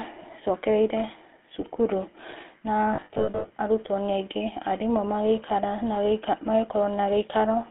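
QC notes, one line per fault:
Throughout: GSM full-rate codec, plainly audible buzzy, gravelly roughness from pulse-driven vocal-tract coding; band limited to roughly 250 Hz–3.4 kHz, which fits a 13 kbps GSM full-rate path.
2.94–3.52 s: lost GSM frames, scattered over about 560 ms with runs up to roughly 70 ms; each gap holds the last good frame, giving brief rough metallic ringing.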